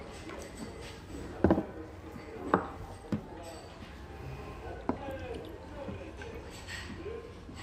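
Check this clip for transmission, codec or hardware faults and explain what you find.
One codec fault is present, a brief burst of damaged data in a compressed stream at 0.81 s. At that point a short stretch of the compressed data has been corrupted, so the decoder cannot read those bytes as a valid frame. It loses synchronisation and has to search forward for the next frame header before decoding can resume. The sound is a momentary chirp or blip lasting about 14 milliseconds, cutting across the audio at that instant.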